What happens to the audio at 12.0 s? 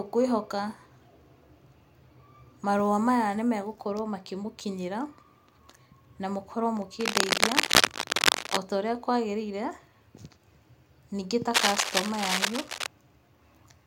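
A worn cable or connector is likely being moved between 11.53 and 12.87 s, so its contact resistance jumps around rapidly and injects dense, uneven bursts of noise into the signal. The result at 12.0 s is cable scratch noise: a scratching, rustling layer riding over the speech at roughly the same loudness as the speech, lasting a little over a second before it stops.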